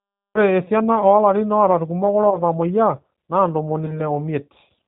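Speech coded end to end with the G.729 codec, which at 8 kbit/s rebuilds each 10 ms frame from a vocal tract filter, a pitch predictor and a handful of pulses, and passes nothing above 4 kHz. Here that shows as a dull, band-limited sound with a plainly audible rough, slightly synthetic edge. The sound points to the G.729A variant. Twice, VoIP packet loss concealed by the speech codec breaks the flow. Each gap is about 20 ms of missing audio, which fits a single lost packet. With no new data, the decoder kept replaying its last pitch and filter at falling gain, so the sound stretches into a brief buzzy tone or coloured noise that fades. Because each frame depends on the previous one, the damage lingers after the packet returns. The first loss runs from 2.30 to 2.39 s, just after "esiana oolarin oota ilkumok", and the second runs from 3.86 to 4.06 s, where the sound stays weak and smeared for close to 0.2 s.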